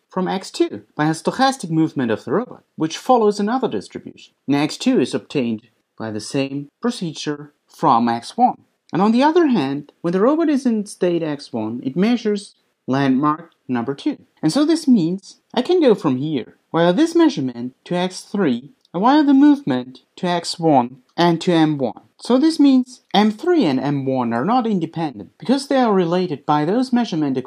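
Nothing stood out as a technical problem on listening to this audio.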